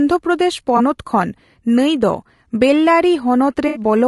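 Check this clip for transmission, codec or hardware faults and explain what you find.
Two faults are present: codec damage across the whole recording and two short dropouts repaired by concealment.

Throughout the speech there is plainly audible low-delay AAC compression, likely from AAC-ELD at a low rate, consistent with about 32 kbps. The codec's short frames resolve pitch harmonics coarsely and spend few bits per frame, so at this rate the voice comes out rough and grainy. Noise fills the gaps between harmonics, and the upper band sounds dulled or synthetic.

AAC frame loss with concealment occurs at 0.77–0.81 s and again at 3.67–3.81 s. The first gap fits a single lost frame, roughly 20 ms of audio. The second fits about four consecutive frames, around 80 ms. In each case the decoder rebuilt the missing audio by reusing the last good spectrum with randomised phase or interpolated energy. 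The first sounds like a brief smeared, noisy blip. The longer second gap is a phasey, washed-out patch before normal decoding resumes.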